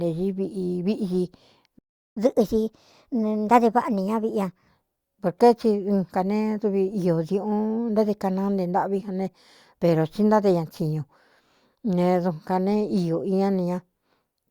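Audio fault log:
1.79–2.17 s, playback stall: the speech cuts out mid-flow and the output stays silent for about 0.38 s before resuming. A gap like this, landing in the middle of running speech rather than at a natural pause, most likely comes from the player exhausting its buffered audio or having its output thread held up, so nothing reaches the speaker until data flows again.
2.17–4.69 s, catch-up at higher speed: straight after the gap the speech runs at 1.15 times normal speed, with pitch lifted by roughly two semitones, giving a hurried, slightly higher-voiced quality. The player is resampling its accumulated backlog to drain it faster and regain the time lost in the stall. Because it speeds up by resampling rather than time-stretching, pitch rises together with tempo, and both settle back to normal once the delay is recovered.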